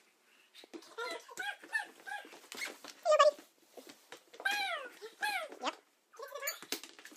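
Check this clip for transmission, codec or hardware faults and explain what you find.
There is one fault, and it runs through the whole clip. Audio read two samples at a time (double speed), throughout: the reader treats each pair of samples as a single frame, as if expecting two channels or wider samples. Playback runs 2x fast and a full 12 semitones (one octave) high.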